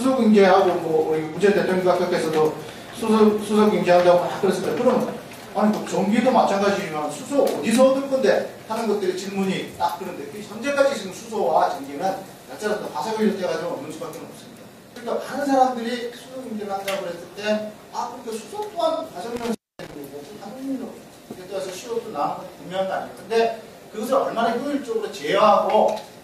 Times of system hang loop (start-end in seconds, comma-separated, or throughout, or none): none